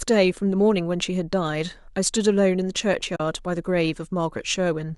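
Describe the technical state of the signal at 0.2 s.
At 0.2 s the speech signal is intact, with no fault present beyond the light coding texture of what is likely low-delay AAC compression.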